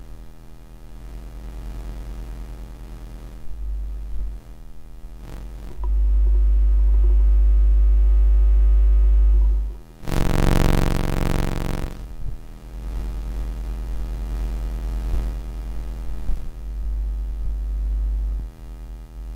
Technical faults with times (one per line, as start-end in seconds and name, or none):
3.29-17.87 clock drift buffer slips